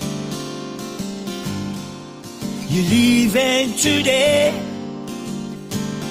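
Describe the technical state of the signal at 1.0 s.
At 1.0 s the signal is intact, with no dropout, distortion, click or other fault to be heard.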